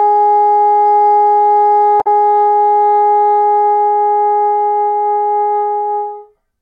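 A short recording of sounds with damaged data in a compressed stream at 2.0 to 2.07 s: corrupted bytes make the decoder misread frames and lose sync, producing a brief chirp or blip. A spectrogram would show a narrow vertical smear of broadband energy, and the waveform a sudden discontinuity.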